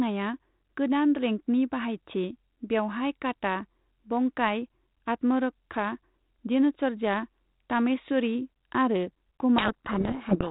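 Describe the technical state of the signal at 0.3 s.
At 0.3 s the signal is intact, with the speech passing through the G.726 ADPCM path at 32 kbit/s and nothing going wrong at that moment.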